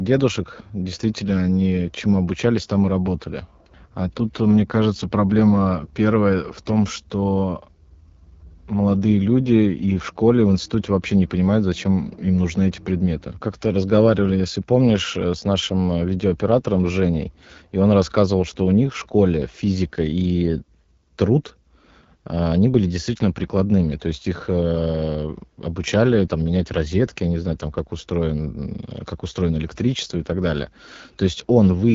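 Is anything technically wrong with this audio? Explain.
Yes. Throughout the speech, the AMR wideband (HD Voice) codec is plainly audible, and the rough, raspy texture points to one of its lowest rates, around 8.85 kbit/s. The codec models speech below 6.4 kHz as pulses through a vocal tract filter, and at this rate too few bits remain to shape them cleanly. It fills 6.4 to 7 kHz with shaped noise. On a spectrogram, harmonics stop near 6.4 kHz, a structureless noise band sits above, and nothing appears above 7.5 kHz.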